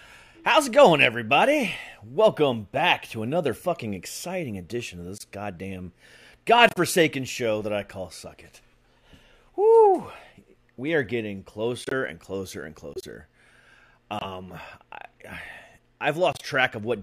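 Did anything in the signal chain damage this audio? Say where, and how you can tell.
Yes, at the codec stage: corrupt frame muted. Silence cuts in abruptly at 5.18 s after "fucking exciting edition of", then at 6.69, 11.83 after "are getting", 12.94 after "and closer and", 14.19 and 16.33 s. Each gap lasts 60 to 150 ms. The decoder rejected damaged frames and silence filled them. Timing stays intact.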